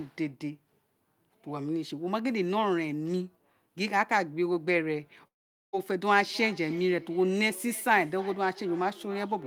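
From 5.27 to 5.75 s the speech cuts out for almost half a second. The last sound is stretched into a fading buzz that sinks to near silence, likely a long network dropout. On a spectrogram, smeared harmonics thin to an almost empty band before speech resumes.

From 6.08 s to the end, each phrase returns roughly every 0.3 s: feedback echo between two devices, where one plays the other's microphone signal back into it. The repeats sound thin and ringing, peaking about 20 dB below the speech, and show as faint, evenly spaced copies trailing each syllable on the waveform.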